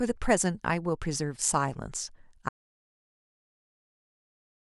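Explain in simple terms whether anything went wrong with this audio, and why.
Something did go wrong. At 2.49 s the speech stops abruptly and the rest of the clip, through to the end, is total silence. This is an audio dropout to silence. Even a quiet room leaves a faint background hiss, but here there is none. That points to the input signal being lost, likely through a disconnected microphone, a broken link or an accidental mute, while the recording carried on. Whatever was said after that moment was never captured.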